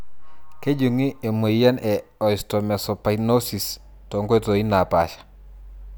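No technical faults are audible.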